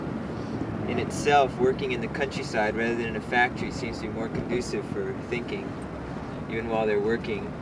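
No audible faults anywhere in the recording.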